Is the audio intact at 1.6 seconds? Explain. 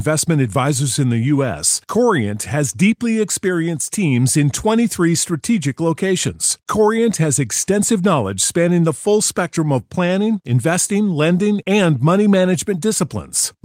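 Yes, the speech at 1.6 seconds is intact: no dropout, click, distortion or other fault can be heard at that moment.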